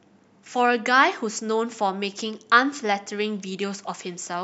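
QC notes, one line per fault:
Nothing here needs flagging, so there's nothing to log for this speech clip.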